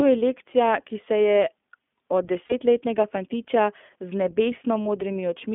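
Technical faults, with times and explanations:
Throughout: iLBC codec. The speech is confined to roughly 200 Hz to 3.5 kHz, with a plainly audible rough, synthetic edge. Each short frame's excitation is coded independently, consistent with the 20 ms, 15.2 kbps iLBC mode, which coarsens fine vocal detail.
2.46–2.54 s and 4.83–4.88 s: lost iLBC frames. Each gap of about 40 ms, which fits two dropped 20 ms frames, is filled by a repeated pitch cycle mixed with noise. It sounds like a brief buzzy, held vowel, and normal speech resumes almost immediately after.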